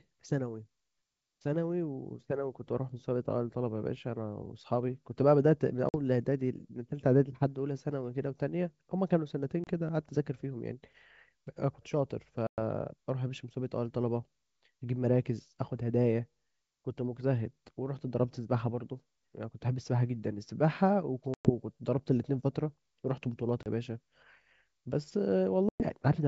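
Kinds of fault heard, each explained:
Packet loss on an ADPCM call: you get six hard-edged silent holes at 5.89, 9.64, 12.47, 21.34, 23.63 and 25.69 s, each 30 to 110 ms long, roughly a few to ten packets dropped apiece. ADPCM predicts each sample from the last and adapts its step size as it goes, so a gap leaves the decoder out of sync with the sender. The sound comes back slightly distorted, then settles within a few tens of ms.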